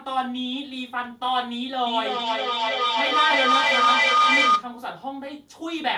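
From 1.86 to 4.73 s there's feedback howl: the mic-to-speaker loop keeps gaining and swells into a tone near 1.5 kHz, pulsing about every third of a second.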